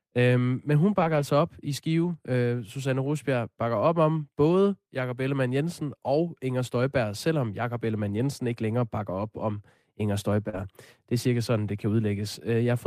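Brief rough, noisier patches sit at 0.99–1.21 s, 2.03–2.09 s, 6.67–6.69 s and 8.17–8.19 s. This is lost packets rebuilt from error correction: the decoder played low-bitrate copies carried in the following packets, so there is no gap, just coarser sound for 120 ms, 40 ms and two 20 ms stretches.

At 10.49–10.55 s a short smear is heard, a short concealed packet loss. About 40 ms never arrived, and the receiver extended the preceding sound to cover the hole before blending back. The final 20 ms of that span, 10.53–10.55 s, was instead rebuilt from an error-correction copy.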